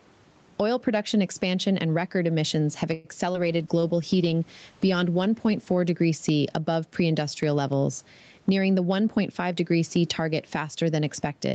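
Throughout the speech there is gain pumping: the background room noise rises in the pauses and sinks by around 10 dB beneath each loud syllable, so loud and quiet passages sit unnaturally close in level and the whole recording sounds squashed. The likely cause is microphone gain set far too high, with a fast limiter or compressor clamping down every time the level peaks and releasing as soon as it falls.

From 2.93 to 3.07 s, right after "and record emissions have", there is a call audio freeze. The last sound is drawn out as a fading tail for about 112 ms instead of moving on, and the speech then resumes exactly where it stopped, with nothing skipped. Packets were likely held up in transit, letting the jitter buffer run dry, so the receiver stretched what it had until delivery resumed. The result is an inserted gap and 112 ms of added delay.

Between 3.33 and 3.36 s comes short concealed packet loss. 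About 20 ms of audio never arrived in time, and the decoder covered the hole with roughly 16 ms of synthesised continuation of the preceding sound before blending back into real audio. It is heard as a brief smear or wobble.

A call bitrate drop runs from 3.37 to 6.94 s, between "and record emissions have" and "industrial levels". The bandwidth estimate fell and the Opus encoder was pushed from 32 kbps down to 11 kbps, holding at the lowest rate for about 1.95 s. With far fewer bits the coding becomes coarse, and the speech takes on a rough, watery texture until the rate recovers.

From 8.52 to 9.53 s, just after "industrial levels", a jitter buffer speed-up plays the speech at about 110% of normal rate. The buffer had built up more audio than its target, so the receiver trimmed short pitch-period-length slices repeatedly, about a tenth of a second in total, to bring the delay down. Pitch stays unchanged, but the delivery sounds noticeably hurried over that second.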